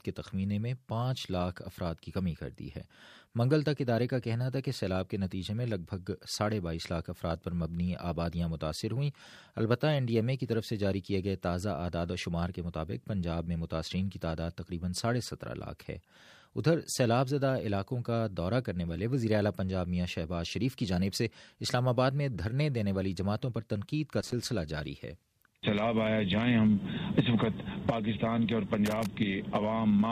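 At 24.21 s a short burst of loose connector crackle appears, lasting about 0.12 s, and a second follows at 28.86 s for about 0.2 s. A worn or dirty contact is briefly making and breaking, chopping the signal into irregular scratchy crackle.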